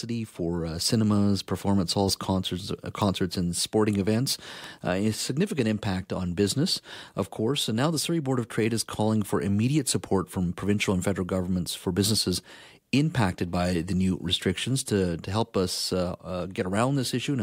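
A speech clip with two bit error spikes. The first is at 3.02 s and the second at 4.64 s. Each is one sharp, bright tick that sits apart from the speech. The first peaks at about -15 dBFS and is as short as a single sample. The second reaches about -21 dBFS and lasts slightly longer, consistent with three samples in a row. A flipped bit in memory or on a digital link makes the sample value jump by a power of two and then snap back.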